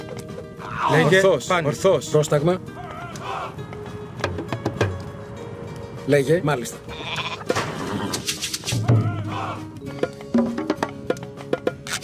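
No technical faults can be heard anywhere in the audio. Nothing in the recording calls for a fault to be described.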